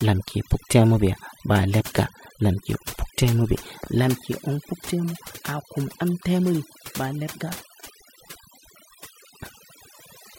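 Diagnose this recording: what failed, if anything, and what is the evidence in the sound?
The failure is in call processing: overdone noise removal, a noise suppressor set far too aggressively on a noisy speech recording. Throughout the clip it cuts individual frequency bands whenever their level sits near its noise estimate, and the quieter parts of the voice are removed along with the noise. The background drops and breaks up into twinkling specks.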